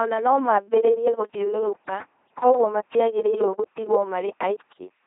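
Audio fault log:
throughout: LPC-10 vocoder. The speech has a heavy, buzzing robotic quality and nothing above 3.8 kHz. Each moment is rebuilt through a ten-pole vocal tract filter excited by either a pulse train or noise, which fits a 2.4 kbit/s LPC-10 stream.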